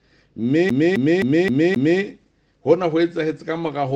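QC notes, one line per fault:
0.69–2.01 s, CD stuck on one turn: a 263 ms slice of the sound repeats five times, with a tiny mute at each jump. That's the laser getting kicked back a track at the same spot every revolution, so you get that quick, even skipping-disc stutter.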